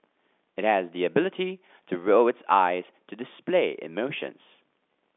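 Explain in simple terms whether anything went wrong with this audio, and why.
Nothing went wrong with this audio; it sounds the way ordinary telephone speech is meant to sound.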